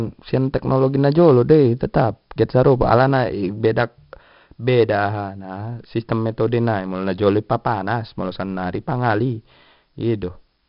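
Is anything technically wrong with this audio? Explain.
Yes, heavy 4-bit ADPCM compression throughout: each sample is a coarse step from a prediction, so loud syllables carry gritty hiss and nothing's above 5.3 kHz.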